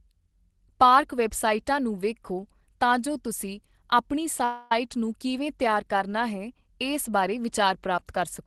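Speech carried over an Opus call path, its spectrum stopping around 12 kHz as a low-bitrate setting near 20 kbps would produce, contains a call audio freeze from 4.44 to 4.72 s. For about 270 ms the last sound is stretched into a fading buzzy fill, most likely because packets stalled and the jitter buffer ran dry. On a spectrogram that stretch appears as smeared, repeating, fading bands rather than a blank column. The waveform shows a decaying tail instead of a flat gap. Nothing is lost, and speech resumes exactly where it stopped, arriving about 270 ms later.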